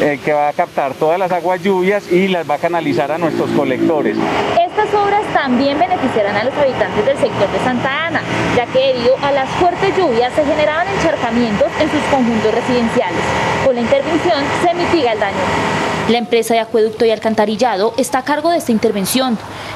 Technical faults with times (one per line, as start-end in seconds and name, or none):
none